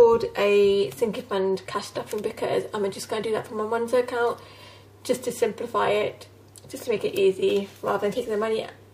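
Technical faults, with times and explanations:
8.12 to 8.19 s, corrupt frame decoded: bits inside the compressed stream were flipped, and the decoder played the damaged data instead of concealing it. For roughly two consecutive frames it applied wrong gains and misread spectral codes, so energy landed at frequencies that do not belong to the sound. The result is a brief glitch of about 70 ms near the end of the clip, with the error peaking at about -25 dBFS.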